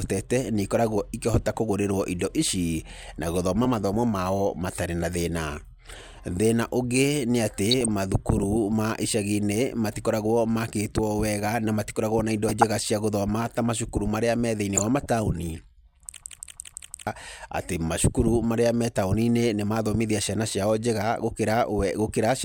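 DAB burbling hits three times: 7.71 to 7.88 s, just before "mathukuru ma"; 12.49 to 12.63 s, after "wega na matikoragwo na"; and 14.77 to 15.09 s, after "macukuru maria me thĩiniĩ". Weak reception let a small fraction of bits through uncorrected. Single sub-bands pick up short blips of noise or jump in level.

A system hang loop follows from 16.21 to 17.07 s. The machine froze while playback kept cycling one buffer. A 170.67 ms slice, which fits an 8192-sample buffer, repeats five times at 5.86 Hz. It sounds like a machine-gun stutter. About a second of audio is lost.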